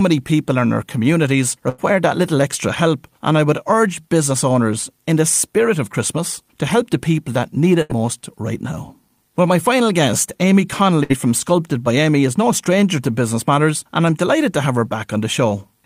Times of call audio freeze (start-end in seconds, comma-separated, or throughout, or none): none